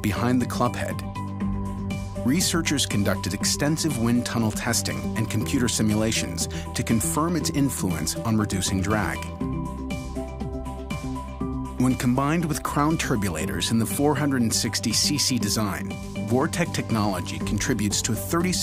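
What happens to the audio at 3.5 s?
Nothing goes wrong at 3.5 s; the audio plays through that moment intact, with no dropout, click, distortion or other fault.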